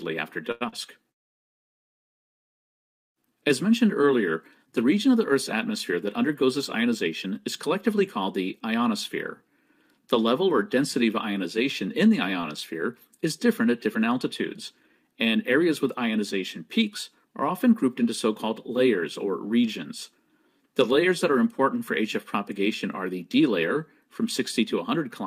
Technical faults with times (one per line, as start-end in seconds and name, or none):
0.51-0.63 short stall from a late packet
0.69-0.74 short concealed packet loss
5.90-7.27 jitter buffer speed-up
12.41-12.45 short stall from a late packet